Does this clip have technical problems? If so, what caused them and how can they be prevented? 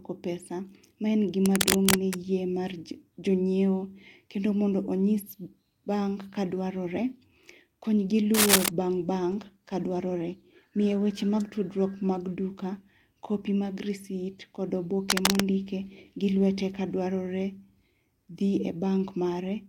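Yes. Cable scratch noise appears at 1.46 to 2.17 s, 8.34 to 8.68 s and 15.10 to 15.44 s: bursts of uneven scratching over the speech, about as loud as the speech in the first and somewhat louder in the other two. The likely cause is a worn cable, connector or control being moved, so its contact resistance jumps around rapidly. Replacing worn cables and connectors and keeping them still while recording would prevent it.

A call bitrate drop runs from 9.33 to 13.47 s. The speech turns rough, watery and duller in the top end, worst for about 2.8 s, which fits the encoder falling from around 64 kbps to about 21 kbps after the call's bandwidth estimate dropped. A steadier, less congested network connection would prevent it.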